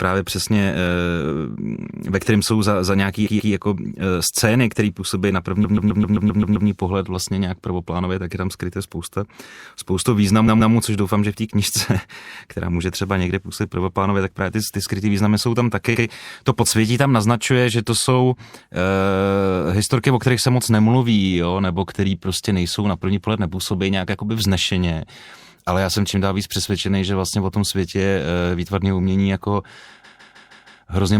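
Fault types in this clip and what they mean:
Repeated frames: blocks of 0.1 to 0.16 s of speech replay up to eight extra times, a stutter adding time rather than leaving gaps.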